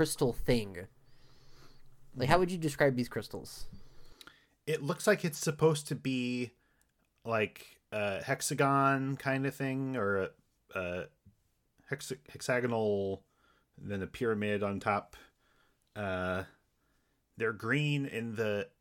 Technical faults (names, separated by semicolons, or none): none